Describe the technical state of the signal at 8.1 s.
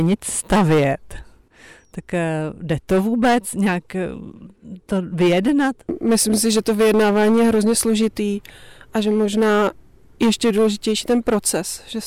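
At 8.1 s the speech is hard clipped, as it is across the whole clip. The signal is driven about 12 dB past what the stage can pass, so its peaks are sliced flat and a modest share of samples, around seven percent, sit pinned at the limit. Those square tops add harmonics high in the spectrum, heard as a harsh fuzz on every loud syllable. Unlike gentle saturation, the distortion starts abruptly at the ceiling instead of thickening gradually.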